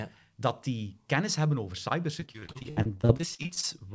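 From 2.20 s to 3.65 s, just after "die kennis hebben over", the call suffers repeated packet loss (robotic sound). Packets keep going missing, some twenty in quick succession, and the receiver patches each hole by stretching the last stretch of audio, with no gap longer than about 60 ms. About a third of that span is filled this way, so the speech turns choppy, with fragments dropped, all within a band that stops at 8 kHz, consistent with a wideband call codec.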